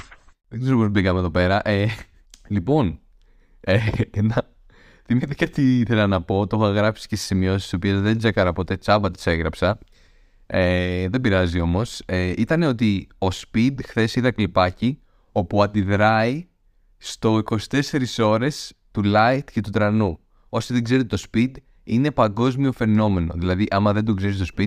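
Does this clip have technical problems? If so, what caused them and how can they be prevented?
No, there are no technical faults to point to in this speech clip. With nothing going wrong, there is no cause to trace and nothing that needs preventing.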